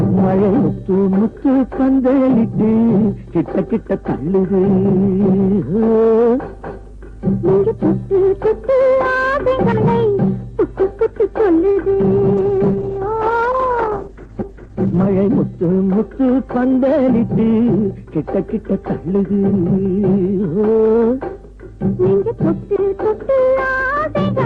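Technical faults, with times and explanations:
11.71–11.78 s, short stall from a late packet: a packet showed up late, the jitter buffer ran dry, and the receiver stretched the last sound for about 50 ms until it arrived. Nothing's actually lost, but you hear a held moment with a faint buzz or dip, and playback sits 50 ms later from there.
12.38–15.12 s, call bitrate drop: the bandwidth estimate fell and the encoder got pushed from 48 down to 12 kbps, staying at the bottom for about 2.7 s. At that rate Opus codes coarsely and trims the highs, so things go rough and muffled until it climbs back.
14.69–15.29 s, jitter buffer speed-up: the buffer was holding more audio than it wanted, so the receiver snipped out lots of tiny pitch-period chunks, roughly 70 ms in total. Playback runs at about 109% with the pitch unchanged, so this stretch feels a touch rushed.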